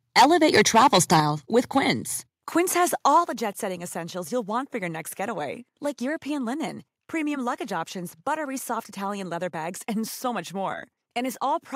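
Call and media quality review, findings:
Microphone overload, three spots. 0.16–1.2 s is the worst: peaks roughly 10 dB past full scale, about one sample in twenty flattened, so the loud syllables crackle and sound harsh. Shorter hits at 1.76–1.79 s (about 2 dB over) and 3.16–3.18 s (about 1 dB over, a small share of samples), just before "the jet setting essentials". Likely cause is mic input gain set too hot, driving the converter into its ceiling so the wave tops get cut off.

Microphone volume stepped down, four times. Sudden level drops at 0.2 s (about 2 dB), 1.2 s (about 6 dB), 2.22 s (about 3 dB) and 3.24 s (about 6 dB), the last right before "the jet setting essentials". Each drop lands just after a clipped stretch, with the speech and the room noise falling together in one step. Likely the call software's automatic gain control reacting to the clipping and pulling the device input down in increments rather than ramping smoothly.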